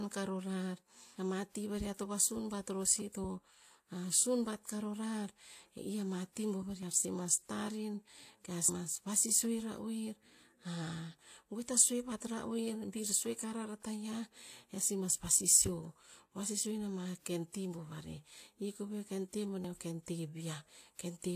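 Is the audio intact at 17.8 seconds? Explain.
No. At 17.8 seconds, as throughout the clip, transcoding between lossy codecs is audible: layered coding artefacts and nothing above 14.9 kHz. This likely comes from HE-AAC at 24 kbit/s re-encoded to WMA 1 at 96 kbit/s, the second codec adding its own damage.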